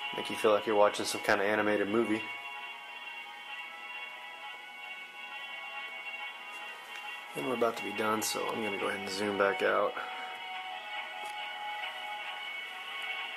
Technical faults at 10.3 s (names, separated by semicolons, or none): none